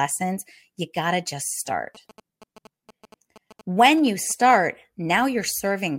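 At 1.95 to 4.55 s, after "got to just", GSM signalling bursts from a nearby 2G phone are rectified, adding a faint galloping dit-dit-dit of short 217 Hz buzzes.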